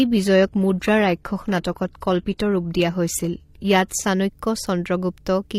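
From 0 to 4.09 s the player is running an adaptive stream starting at a low bitrate: it opened on a cheap rendition to begin playback quickly, then switched up once the connection was measured. Until then the speech has a thin, synthetic-sounding top end and stronger codec artefacts, which fits a roughly 20 kbit/s HE-AAC stream. At 4.09 s quality jumps without a gap to a fuller sound, with nothing above 14.9 kHz.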